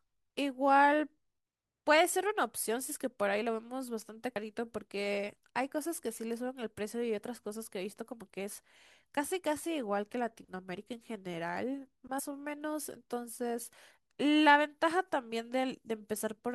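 At 4.35 s and again at 12.18 s the speech jumps forward. Both are compressed frames skipped: the decoder never plays a stretch of the coded stream, either because it's missing or because it was rejected as corrupt. Each jump is roughly 70 ms, which fits about three frames of 21.3 ms each.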